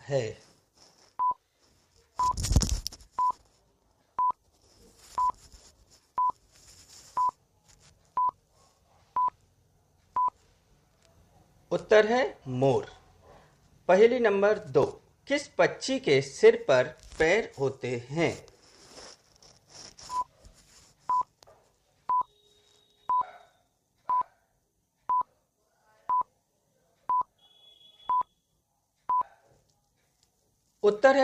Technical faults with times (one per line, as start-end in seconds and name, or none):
2.88 overlap between stream segments
4.87 overlap between stream segments
8.85 overlap between stream segments
14.83 overlap between stream segments